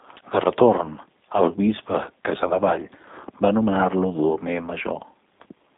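From start to finish the speech sounds narrow, slightly rough and synthetic, with a buzzy, processed edge. The band runs only from about 200 Hz to 3.7 kHz, and nothing at all passes above 3.8 kHz. This is the G.729 codec damage, plainly audible and consistent with the 8 kbit/s G.729A variant. The codec rebuilds each 10 ms frame from a vocal tract filter, a pitch predictor and a handful of pulses, and that sparse rebuild causes the roughness.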